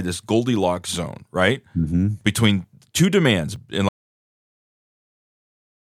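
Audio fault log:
2.21 s and 3.56 s, dropped buffer (overrun): at each point the speech jumps ahead, about 10 ms missing and the two sides spliced with no gap. The likely cause is the recording software failing to collect a buffer before the hardware overwrote it; the second skip lands just after "two demands".
3.89 s to the end, audio dropout to silence: right after "two demands and" the speech cuts out to silence with no room tone, staying dead until the clip ends. This points to a likely lost input, such as a disconnected device or failed link, while silence kept being written.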